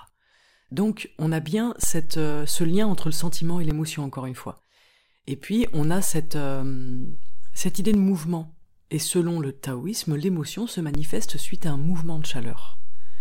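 DC steps at 1.84–3.71 s (after "on a bien", ending before "encore une fois"), 5.64–7.94 s (ending before "de mouvement") and 10.95 s to the end (after "le taoïsme l'émotion se") shift this speech recording's zero line by about −16, −18 and −15 dBFS, each edge a low thump while the speech continues.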